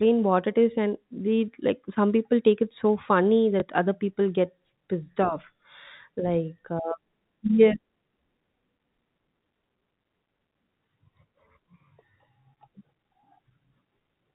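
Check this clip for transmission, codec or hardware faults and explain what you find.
One transmission fault can be heard in this speech clip.

Packet loss with last packet repeated occurs at 3.6 s. A 20 ms stretch of audio went missing, which points to a single lost packet, and the receiver filled the gap by playing the previous packet a second time. The single repeat sounds like a small blip. The gap is too short for a sustained buzz. The band limit of the G.711 telephone coding can be heard around it.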